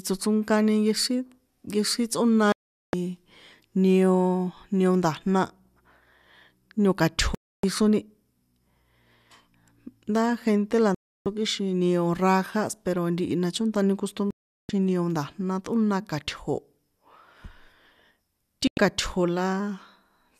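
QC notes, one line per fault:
2.52–2.94 s: digital broadcast dropout, the speech mutes abruptly for about 0.41 s, consistent with roughly 17 corrupted frames being discarded by the receiver.
7.35–7.64 s: digital broadcast dropout, a 0.29 s silent hole where failed frames were muted, pointing to about 12 lost frames; the missing speech is gone.
10.95–11.26 s: digital broadcast dropout, sound cuts to silence for about 0.31 s while the decoder waited for valid frames, fitting roughly 13 frames lost.
14.31–14.70 s: digital broadcast dropout, just after "ntihi na chontani" the audio mutes for about 0.38 s, consistent with around 16 frames failing checks.
18.67–18.78 s: digital broadcast dropout, a brief 0.10 s gap, suggesting about 4 bad frames muted before clean reception resumed and speech continued.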